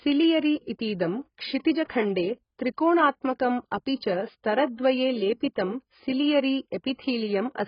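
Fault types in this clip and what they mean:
AAC compression: heavy low-bitrate coding, likely AAC-LC near 12 kbps, leaves dull, smeared speech; a spectrogram shows nothing above 5.1 kHz.
Pre-echo: quantisation noise spread through a transform block puts a short hiss before an attack at 1.85 s, visible as a 46 ms smear ahead of the waveform onset.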